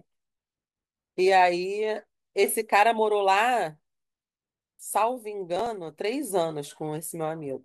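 From 5.56 to 5.66 s a short burst of processor overload crackle tears the speech: around seven missed buffers of roughly 10 ms each are skipped outright.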